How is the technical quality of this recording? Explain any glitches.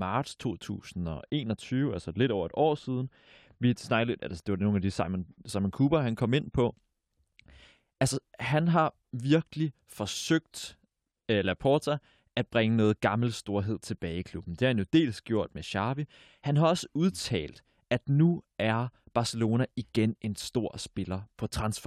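The main problem is a stretch of wrongly applied de-emphasis near the start. From 1.09 to 5.49 s, a treble-cutting filter seems to have hit speech that never had pre-emphasis, rolling off the highs smoothly to about 11 dB down at 10 kHz relative to 1 kHz. The voice goes dull and muffled, as if heard through a blanket.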